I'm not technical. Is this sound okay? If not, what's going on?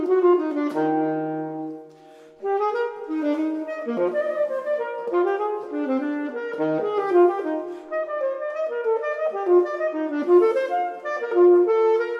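Yes, the sound is fine: nothing in it points to a technical problem, and there's nothing you need to worry about.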